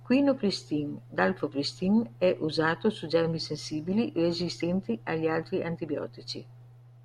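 No technical faults are audible.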